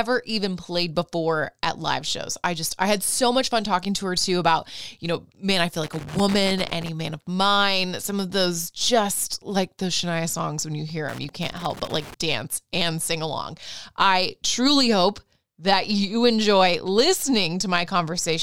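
At 5.84 s, right after "know man I feel", loose connector crackle breaks in for about a second, until 6.89 s before "man of mine some", and returns from 11.09 to 12.14 s between "songs when you hear" and "dance and sing along". A worn contact is making and breaking, chopping the signal into irregular scratchy bursts. The waveform shows jagged dropouts and spikes; a spectrogram shows scattered broadband vertical streaks.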